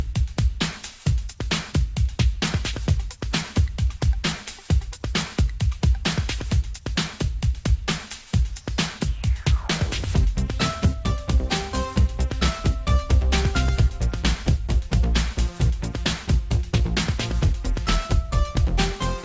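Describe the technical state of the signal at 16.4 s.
The signal at 16.4 s is intact, with no technical fault audible at that moment.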